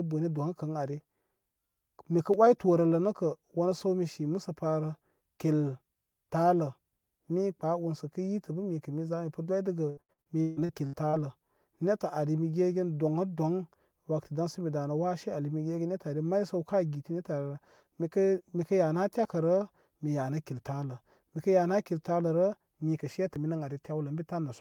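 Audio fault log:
2.34 s and 23.36 s, dropped buffer (overrun): each is a single jump where the speech skips ahead, skipping roughly 10 ms at the first and 20 ms at the second. The likely cause is samples being overwritten before they were read. Unlike packet loss, each is one isolated skip with no smeared fill.
9.89–11.15 s, repeated packet loss (robotic sound): right after "mipə doydəgə", eight gaps in quick succession, the longest 152 ms, are patched by stretching the last sound. Over 40% of the span is filled this way, giving a choppy texture with pieces missing rather than a lone click.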